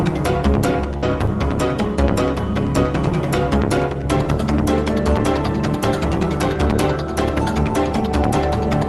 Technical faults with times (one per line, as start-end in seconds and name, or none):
0.97-1.05 burst of packet loss